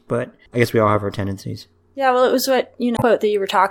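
At 2.94 s, lasting about 0.09 s until 3.03 s, the speech breaks up from damaged data in a compressed stream. Corrupted bytes made the decoder misread frames, lose sync and hunt for the next header. The waveform shows a jagged discontinuity.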